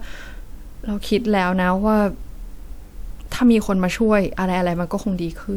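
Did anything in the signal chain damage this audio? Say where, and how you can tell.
No, nothing along the way seems to have damaged this speech clip; I can't hear a single spot where any stage left its mark.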